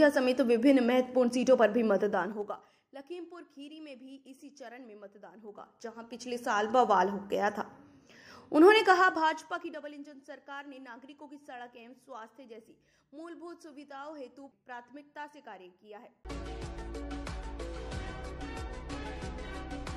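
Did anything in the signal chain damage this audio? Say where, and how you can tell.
Yes. There is zipper noise from 2.04 to 2.88 s, 5.39 to 6.78 s and 8.82 to 9.94 s. A level change of about 25 dB is applied in the gain processing in coarse 3 dB, then 2 dB steps, about ten a second, without smoothing. Each jump clicks, giving a ticking zip during the fades.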